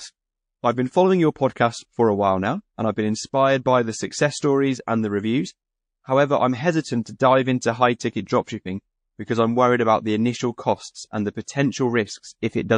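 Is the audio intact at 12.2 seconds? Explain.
No. At 12.2 s the speech carries the MP3 compression damage heard across the whole clip, likely from encoding at a low bitrate around 40 kbps. Starved of bits, the encoder drops weak frequency lines frame by frame, giving watery, swirly sibilants. A spectrogram shows flickering gaps in the frequency content.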